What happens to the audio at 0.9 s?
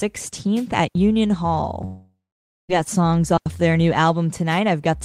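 At 0.88 s the speech drops into a clean hole of near silence until 0.95 s, about 75 ms. That's a digital wireless dropout: the link lost too much data, so the receiver briefly muted with a quick fade, leaving no noise burst on either side.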